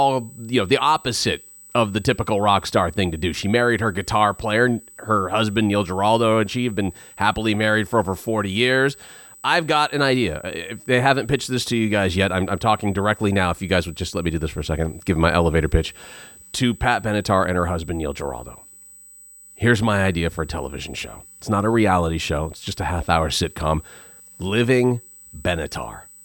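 From start to finish the speech carries USB whine, a steady 8 kHz tone about 25 dB below the speech. Current drawn in 125-microsecond bus microframes leaks in through power or ground. Unlike mains hum, it is a thin, high whistle, not a low buzz.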